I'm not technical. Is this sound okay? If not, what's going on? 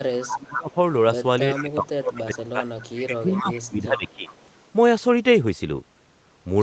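No. Two call problems are audible in this speech.

The first is an echo leak: faint, delayed copies of the talking, about 0.4 seconds late, appear at 0.11–0.26, 1.55–1.64, 2.34–2.38, 2.78–3.62 and 3.97–4.34 s. This is likely a speakerphone at the other end whose echo canceller let some of its own loudspeaker sound back into the microphone. Unlike room reverberation, which blurs every sound evenly, these copies come back separately with a clear gap.

The second is speech suppressed in double talk: the main voice dips at 0.25–0.76, 1.6–2.71 and 3.03–4.34 s, overlapping the echo moments. This is likely the echo canceller getting confused when both sides spoke at once and turning everything down. A bad connection would usually cause clicks or garbled gaps. Here the voice becomes quieter for a stretch.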